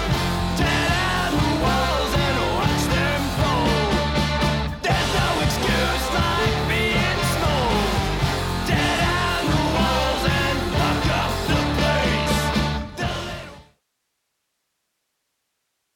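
No technical faults can be heard in this audio.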